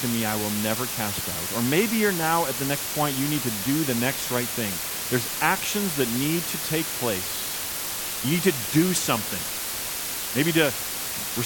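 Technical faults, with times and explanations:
Throughout: low bit depth with dither. A constant, even hiss sits only a few decibels below the speech, which fits a 4-bit signal. Dither turns rounding error into steady white noise, so there is no grainy distortion following the speech, unlike undithered quantisation.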